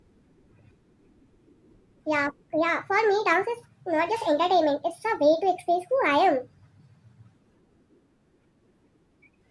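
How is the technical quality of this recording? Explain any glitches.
The speech runs too fast and too high throughout, a wrong sample rate fault. Audio recorded at 16 kHz is being played at 24 kHz without conversion, so everything runs 1.5 times faster and about 7 semitones higher, giving voices a hurried, chipmunk-like quality.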